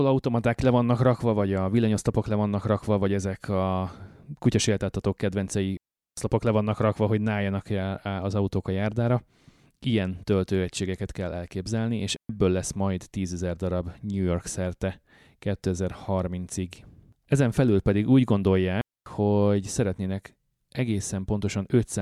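Three clean holes of near silence cut into the speech, with no click or noise burst on either side. The first runs from 5.77 to 6.17 s, after "ezek a kutyaséltáltatók kedvencei" and before "le vannak rakva hogy". The second runs from 12.16 to 12.29 s, after "töltőegységeket kell elképzelni és". The third runs from 18.81 to 19.06 s, before "hogy szeretnének". Each is a digital wireless dropout: the radio link lost too much data, and the receiver muted with a very fast fade for 402, 130 and 252 ms.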